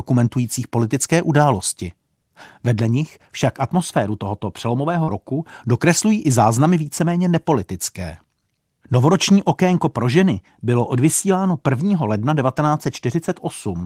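At 5.03 to 5.09 s, between "nich však atmosféru tohoto" and "roku dokreslují i záznamy", short concealed packet loss occurs. About 40 ms never arrived. The decoder filled the gap with a brief smear.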